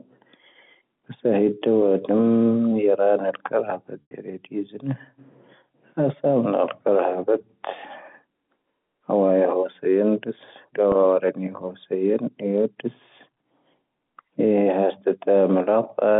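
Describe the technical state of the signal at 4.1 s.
At 4.1 s the speech is inside a packet loss with pitch repetition, spanning 4.02 to 4.11 s, about 90 ms, consistent with three lost packets. The receiver repeats the last pitch period, which sounds like a held, buzzy tone that fades over roughly 50 ms toward silence before the speech cross-fades back in, still band-limited by the G.711 telephone coding.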